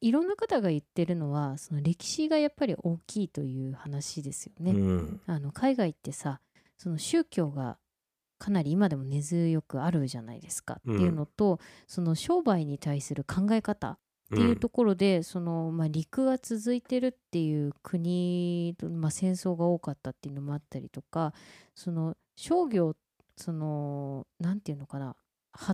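Nothing in the speech stood out as a technical problem on listening.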